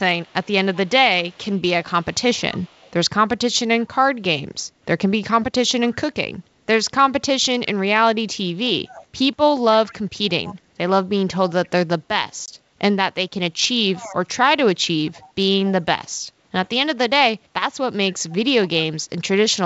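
Right from 0.24 to 2.91 s there's an echo leak: a faint copy of the speech trailing about 241 ms behind, around 30 dB down. It returns at 3.82–3.86, 8.85–9.05, 9.87–10.55 and 11.49–11.69 s, at about 35 to 20 dB below the speech. The likely cause is a far-end speakerphone whose echo canceller isn't fully removing what its mic picks up.

At 12.46–12.49 s there's packet loss on an ADPCM call. About 20 ms drops to a hard-edged silence, and the decoder's predictor and step size slip out of sync with the sender's, so the speech comes back briefly off-level or distorted before settling.

After that the echo keeps surfacing at 13.94–14.15 s, its loudest at about 15 dB down, then at 15.06–15.72 and 18.3–18.82 s. It keeps the same 241 ms lag throughout, heard over clean wideband G.722 audio.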